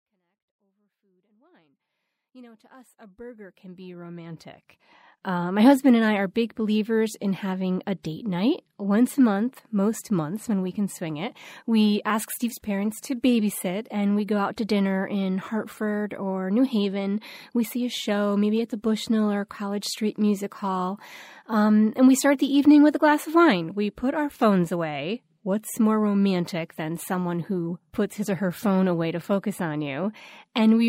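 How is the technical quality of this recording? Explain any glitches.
No glitches in this speech recording; the level eases in smoothly from the start and reaches full by about 5.5 s, with no click or hard edge.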